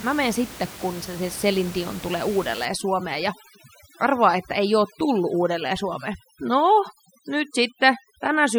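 From about 2.65 s right through to the end at 8.59 s you get overdone noise removal. The noise reduction was pushed too hard, so any frequency band sitting near its idea of the noise gets pulled way down or shut off, and the softer parts of the speech get dragged under with it. The room noise, about 17 dB below the speech, drops away and breaks up into little twinkly specks.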